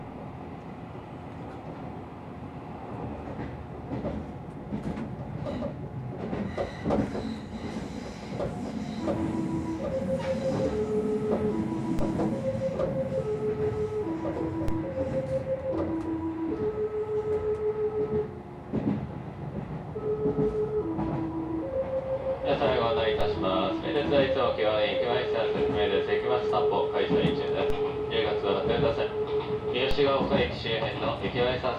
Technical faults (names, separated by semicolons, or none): DC step